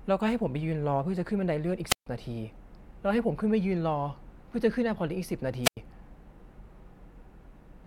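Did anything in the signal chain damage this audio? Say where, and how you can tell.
Yes. The wireless link ahead of the converter suffered a wireless microphone squelch dropout twice, from 1.87 to 2.07 s and from 5.63 to 5.77 s. Each time the FM radio signal faded far enough that the receiver's squelch cut its output, giving a brief burst of hiss or static and then a near-silent hole of about 140 ms in the first case and about 94 ms in the second, before the speech resumed.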